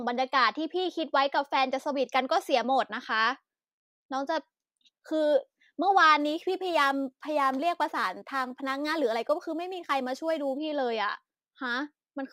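From about 6.2 s to 10.58 s the speech picks up a gritty, inharmonic fizz that rides on the louder and brighter sounds. That's crude rate conversion: samples were simply repeated to stretch the rate, with no filtering, and the pattern fits a 44.1 kHz to 48 kHz jump. The repeating error sits roughly 30 dB below the speech, so it's a grainy buzz made of out-of-tune copies of the voice rather than anything loud.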